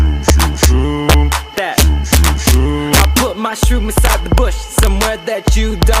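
Across the whole clip there's integer overflow: the signal is pushed about 2 dB past full scale, and instead of being held at the ceiling, those peaks wrap around to the opposite extreme. Only a small fraction of samples, well under one percent, go over, but each one jumps across the entire range, so the loudest moments come out as sharp, violent cracks, far harsher than ordinary clipping would sound.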